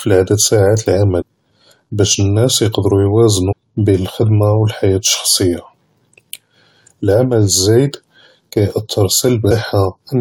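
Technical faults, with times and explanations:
1.20–1.22 s, 3.51–3.53 s and 9.50 s, damaged data in a compressed stream: at each point a short stretch of the encoded stream was corrupted, so the decoder could not read those frames properly, lost its place, and had to resynchronise on the next valid frame header. Each time the speech is interrupted by a brief chirp or blip of about 20 ms. These are garbled bursts from misdecoded data, not noise in the original recording.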